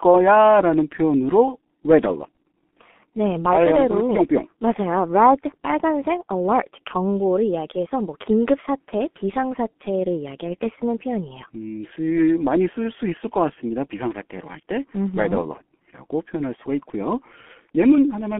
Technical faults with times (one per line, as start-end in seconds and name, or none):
0.00-18.39 G.723.1 codec